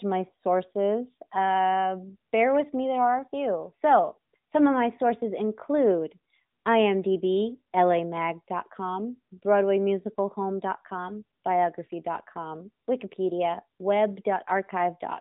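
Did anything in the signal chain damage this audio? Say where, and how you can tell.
Yes: an AMR narrowband mobile codec throughout. Nothing above 4 kHz survives, and the buzzy, synthetic pulse-driven speech, rather than plain band-limiting, fits roughly a 10.2 kbps AMR-NB mode.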